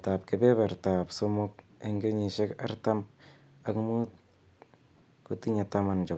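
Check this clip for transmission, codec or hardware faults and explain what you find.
No transmission, codec or hardware faults are audible in this speech; the top end stops at 8 kHz, which is expected from the call path and its microphone processing.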